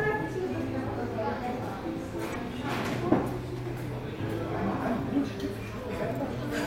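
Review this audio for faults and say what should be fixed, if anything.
Two bursts of damaged data in the compressed stream need fixing: one from 2.31 to 2.36 s, and a shorter one at 6.23 s. At these points corrupted bytes reach the decoder, which misreads the affected frames, loses sync and hunts for the next valid frame header, producing a brief chirp or squawk. To prevent this, verify stream integrity with checksums and re-fetch or re-encode from an undamaged source.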